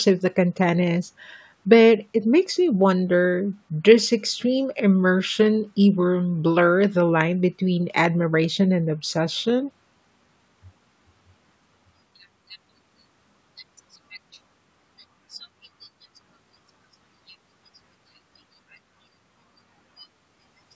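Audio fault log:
Nothing to log here, as the speech just sounds like it went through ordinary call microphone processing, with the top end stopping around 8 kHz and the lowest bass trimmed away as you'd expect.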